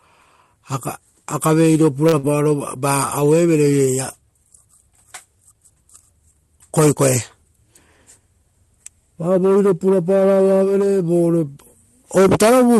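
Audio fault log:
2.07 to 2.15 s, short stall from a late packet. A packet arrived late and the jitter buffer ran dry, so the receiver held the last sound for about 55 ms until the data caught up. Playback then resumed from the same point. Nothing is lost here. The sound is simply held too long, with a slight buzz or dip. Everything after it plays about 55 ms later than before.
2.19 to 2.25 s, short concealed packet loss. About 40 ms of audio never reached the decoder in time, and the receiver filled a gap of about 43 ms with a continuation of the preceding sound before blending back into the real signal. It comes just after the stall, so the two events fall close together. The patch is heard as a brief smear or wobble, and a short sound there can be dropped.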